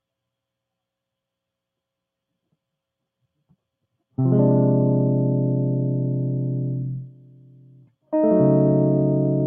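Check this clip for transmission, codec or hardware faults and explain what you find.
The music has passed through a speech noise suppressor, and one passage is cut hard by it. The sound is also band-limited to 8 kHz, as a call codec on this path would leave it.

The noise suppressor applied to music runs through the whole clip. It treats sustained tones and reverb as noise and pulls them down. Attacks survive, but held sound sinks. Level swings of around 20 dB make the music pump and thin out.

The sound cut by the noise suppressor occurs from 6.99 to 8.13 s. Here the suppressor misreads the music as noise and drops it by up to about 22 dB, for about a second in total. Sustains sink and their decays are cut short.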